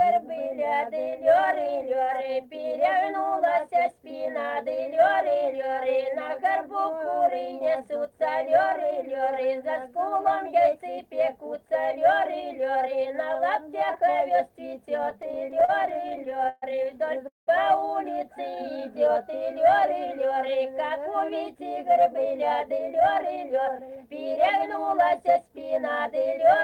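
From 15.03 to 16.64 s, repeated stalls (stutter) break the audio into about two dozen short hold-ups, the longest 131 ms. Unlike a single freeze, these recur rapidly, dragging the sound without dropping any.

At 17.28 to 17.49 s, a call audio freeze holds the last sound for 190 ms, fading into 160 ms of silence before resuming intact. It was likely caused by delayed packets emptying the jitter buffer. This is one isolated gap rather than a stuttering run.

From 18.42 to 19.31 s, jitter buffer slow-down stretches the audio to 95% speed by repeating pitch periods, adding 56 ms. The pitch stays put, so the sound drags slightly rather than dropping in tone.

From 21.14 to 23.89 s, jitter buffer speed-up runs the audio at 107% by cutting pitch periods, removing about a fifth of a second. The sound is hurried but keeps its pitch, unlike a faster playback rate.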